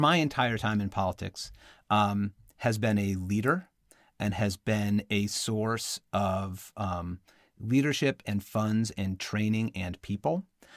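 No technical faults can be heard anywhere in the recording: the signal runs continuously, with nothing interrupting or disturbing it at any point.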